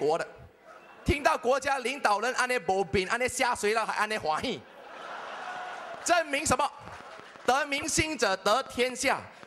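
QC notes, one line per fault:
3.04, 4.89 to 4.99, 7.78 to 7.85, 8.80: corrupt frame decoded. Each is a short chirp or blip. Damaged compressed frames were played anyway, so misread gains put energy at wrong frequencies. The bursts peak at about -40 to -20 dBFS, loudest at 7.78.
5.56 to 9.44: train of clicks. About twenty similar clicks tick over the sound, roughly 4.9 per second at an uneven pace, peaking about 5 dB above the signal. Likely interference from nearby equipment or a faulty connection or power supply injecting pulses.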